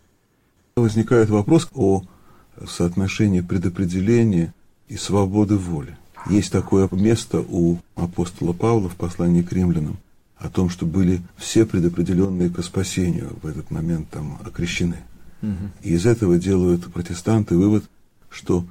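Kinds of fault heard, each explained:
One channel drops out: from 12.25 to 12.40 s the level steps down by about 6 dB and then back up, with sound continuing throughout. The likely cause is one stereo channel briefly lost before the mono sum. A full dropout would leave silence instead.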